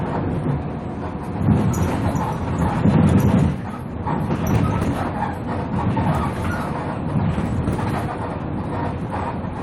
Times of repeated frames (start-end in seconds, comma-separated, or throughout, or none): none